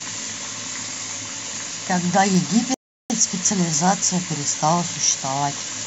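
At 2.74 s the speech halts and falls to silence until 3.10 s, a rebuffering stall: playback used up its downloaded audio and waited for more to arrive. The clip then picks up exactly where it broke off, so no syllables go missing. That continuity separates it from a dropout or packet loss, which skips material. Here the stall only inserts about 0.36 s of dead air, stretching the timeline.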